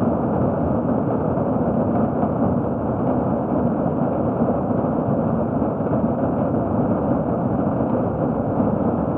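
No technical faults are audible.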